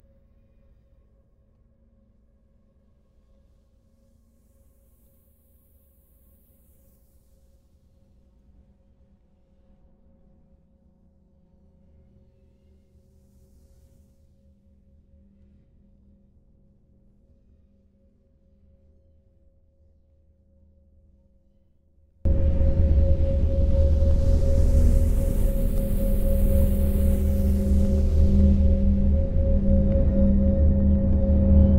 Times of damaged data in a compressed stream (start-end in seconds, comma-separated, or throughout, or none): none